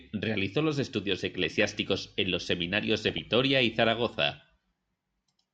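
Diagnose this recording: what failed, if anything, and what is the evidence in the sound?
DAB burbling, a reception and codec failure: bit errors of a few tenths of a percent slipped past error correction into the MP2 data, corrupting samples so single sub-bands blip with short bursts of noise. Burbling covers the speech from 1.51 to 1.75 s, after "realizó los estudios", and from 3.09 to 3.19 s.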